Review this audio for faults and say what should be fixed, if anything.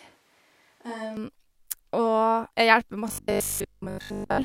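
From the start of the clip until 1.17 s, the recording likely switched to a distant microphone after the close one dropped out. The speech sounds roomy and hollow, thin in the bass, about 5 dB quieter, with room noise only about 30 dB below it. To prevent this, monitor the close microphone's feed and back up its connection so the distant pickup never stands in.

From 3.08 s to the end of the clip, new audio likely arrived too rarely and the software kept repeating short buffers, replacing most of the real audio. That imposes a rigid 50 Hz buzz, which fits a 20 ms buffer, and gives robotic sound from repeated short buffers. To prevent this, give the audio path enough buffering and processing headroom so fresh audio arrives before the last block runs out.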